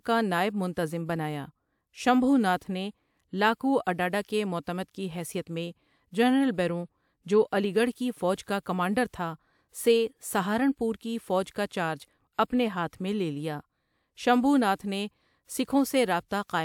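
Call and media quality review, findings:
No audible faults found in the speech recording; no dropouts, distortion or timing problems detected on review.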